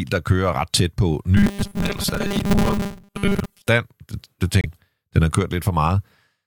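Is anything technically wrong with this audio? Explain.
Yes. From 1.37 to 3.68 s the speech turns into a rigid 200 Hz robotic buzz, likely from repeated short buffers of about 5 ms replacing most of the audio. A spectrogram shows fixed horizontal harmonic lines.

At 4.61 to 4.66 s a brief glitch follows a jump, fitting a broken MP3 bit reservoir across 26.1 ms frames. The waveform shows a short discontinuity.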